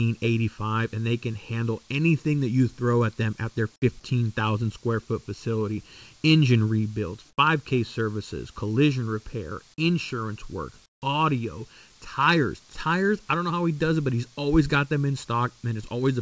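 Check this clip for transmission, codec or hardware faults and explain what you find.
Two faults stand out: a constant comb-filter colouring from channel delay, and two short stretches where the background is replaced by synthetic noise. The audio also passed through a call codec, and nothing reaches above 8 kHz, which fits G.722 at 64 kbps.

Channel delay (comb filtering) runs through the whole clip. One channel arrives a fraction of a millisecond late, and when the two are summed to mono, components they share cancel at evenly spaced frequencies, the first notch falling somewhere near 700 Hz. The result is a fixed hollow, phasey tint on the speech that never changes, because the notches stay in the same place for all sixteen seconds.

Comfort noise in place of the background appears at 7.30 to 7.38 s and again at 10.86 to 11.02 s, between "collision repair insurance work" and "audio tires". 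In both gaps the natural room noise gives way to a smooth, featureless hiss, about 7 dB quieter in the first and about 22 dB quieter in the second, so the floor dips. This is likely discontinuous transmission, with the receiver generating shaped noise while the sender stays silent.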